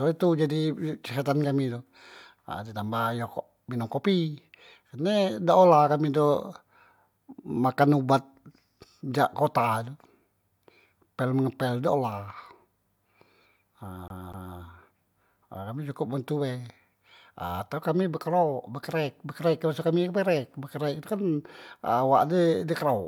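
At 14.08 s the speech catches in a CD stuck on one turn, lasting until 14.57 s. A scratch sends the laser back one track at the same point on each rotation. The same 0.25 s fragment plays twice in a row. A brief mute marks each jump back. The result is a quick, evenly spaced stutter, the familiar sound of a skipping disc. Then the audio moves on.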